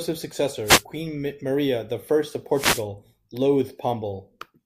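At 0.64 s a wireless microphone noise hit breaks into the speech and lasts until 0.83 s. It sounds like a brief swish of static. The radio link from the analogue FM microphone is fading as reflected signals cancel the direct one. Receiver noise rises and covers the voice. A second, longer hit follows from 2.52 to 2.86 s. It is the same burst of static, again swamping the speech while the signal drops out.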